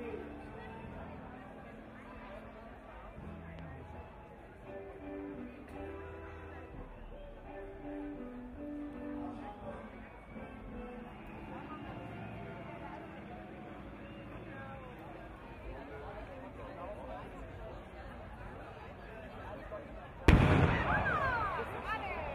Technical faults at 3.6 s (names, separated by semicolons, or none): loud pop